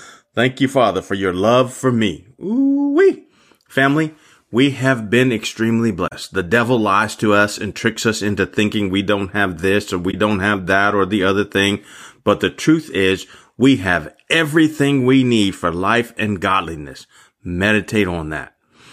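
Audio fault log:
6.07 to 6.13 s and 10.09 to 10.14 s, corrupt frame concealed: two short concealed spans in the speech, each about 60 ms long, which fits a handful of damaged AAC frames. The decoder caught the bad bits and covered those frames itself, either muting them or filling in a scrambled copy of the last good spectrum.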